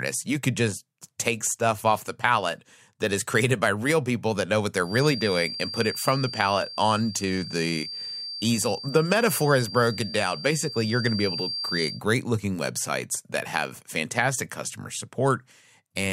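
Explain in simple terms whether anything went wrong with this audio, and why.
A feedback whistle sounds from 4.80 to 12.03 s, after "people that know what" and before "looking websites that have": a thin 4.7 kHz tone at one pitch that slowly swells and fades under the speech. The likely cause is a loudspeaker feeding back into the microphone, poised just short of howling.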